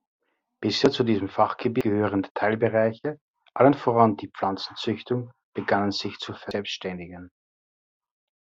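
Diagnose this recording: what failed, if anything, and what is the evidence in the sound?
Codec-side damaged data in the compressed stream: short glitches at 1.81 s and 6.51 s where the decoder misread the damaged frames and lost frame sync.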